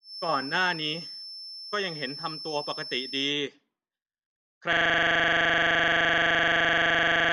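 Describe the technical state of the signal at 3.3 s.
At 3.3 s the speech still carries a feedback whistle, which runs from the start of the clip and ends at about 3.36 s. The likely cause is a loudspeaker-to-microphone loop held right at the edge of feedback, so a single frequency keeps recirculating without growing. It sounds like a thin, steady whistle at about 5.3 kHz, sitting roughly 10 dB below the speech and swelling and fading slowly in level.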